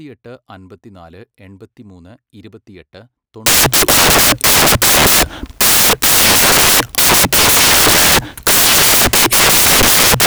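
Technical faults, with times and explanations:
3.46–10.27 s, samples built from the wrong bytes: right after "അൻപത്തിനാല് എൺപത്തിമൂന്ന് ഇരുപത്തിയെട്ട്" the speech turns into loud, harsh broadband noise that runs to the end of the clip. The bytes of each sample are being assembled wrongly, through swapped order or a one-byte misalignment, so the rapidly fluctuating low-order bits land in the most significant position and every value becomes essentially random.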